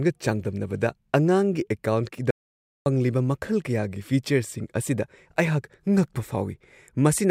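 At 2.31 s the speech cuts off abruptly into an audio dropout to silence lasting until 2.86 s, about 0.55 s of silence with no room tone. Likely the input was briefly lost. The waveform shows a flat line and the spectrogram a blank vertical band.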